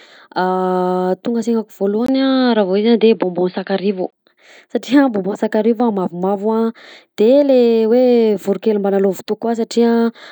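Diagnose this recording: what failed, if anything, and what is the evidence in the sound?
From 2.06 to 4.13 s the speech goes dull and boxy, with nothing above 4.9 kHz, a level shift of roughly 5 dB, and a faint new noise floor around 50 dB down. There's a brief gap of about 20 ms at the switch, and the full-band sound returns afterwards. That points to the input path at the driver or device stage, with the system likely switching to a poorer input device, such as another mic or a headset's call profile, and then back.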